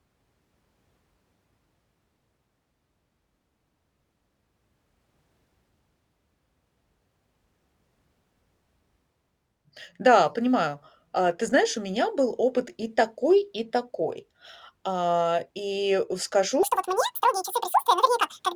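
At 16.63 s, right after "и скажу", a section at the wrong speed begins and runs to the end at 18.56 s. It plays at twice the recorded speed. The speech turns hurried and squeaky, roughly ten semitones higher. A mismatched playback clock is the likely cause.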